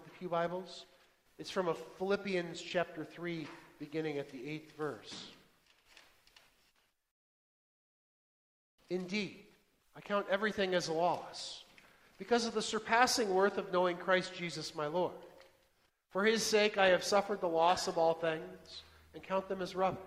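From 16.77 s to the end, the adaptive stream switches to a lower bitrate, suggesting roughly 64 down to 24 kbit/s: the quality changes abruptly and codec artefacts rise, with no gap.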